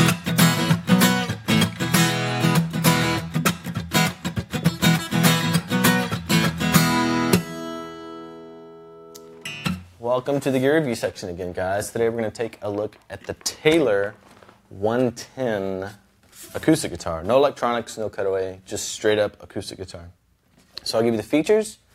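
No technical faults are audible.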